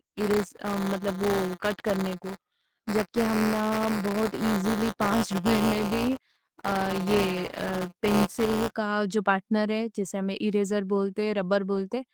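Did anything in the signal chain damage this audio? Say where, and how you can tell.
Yes. From 0.00 to 8.71 s the speech carries a steady robotic rattle at 172 Hz, which fits a 256-sample buffer. This is buffer tearing at the driver or buffer stage. Writer and reader have slipped so their positions cross in every period, and a small slice of each buffer replays audio about 10 ms old between two hard joins. Unlike mains hum, the buzz follows the signal and vanishes in pauses. Unlike dropouts, nothing goes silent.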